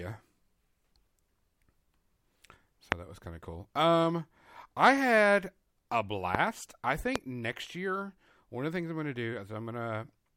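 Speech, with three loud pops cutting through it at 2.92 to 2.94 s, 6.35 to 6.37 s and 7.16 to 7.18 s, the first about 25 dB above the signal and the others about 20 dB. Each is a single sharp hit over continuing audio, likely a voltage spike from a plug, switch or static.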